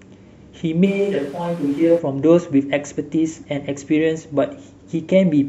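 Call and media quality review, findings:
Switch to a distant microphone, 0.87–1.98 s. Speech abruptly turns roomy and hollow, bass thinned, level down about 5 dB, room noise rising to roughly 25 dB below speech. Abrupt return at 1.98 s. Likely cause: close-mic feed dropped, recording falling back to a far pickup such as a camera mic.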